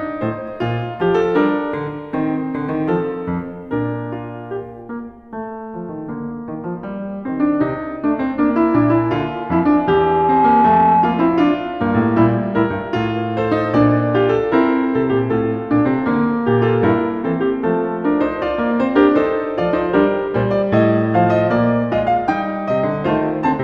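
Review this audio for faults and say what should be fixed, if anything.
From 0.48 to 4.82 s, pre-emphasis left on: the treble lift matching the CD 50/15 µs curve was never undone, leaving 10 kHz about 8 dB above 1 kHz. Unlike a deliberate EQ boost, the lift follows that fixed emphasis shape, so the music turns uniformly bright and hissy. Applying de-emphasis on playback, or honouring the emphasis flag, prevents it.

From 8.93 to 11.49 s, a loudspeaker feedback squeal: the microphone re-amplifies its own loudspeaker until an 853 Hz tone runs away, swelling over roughly a second and a half to sit around 5 dB above the music. Unlike steady hum, it grows from nothing at one pitch. Lowering monitor gain, moving the microphone or notching 853 Hz prevents it.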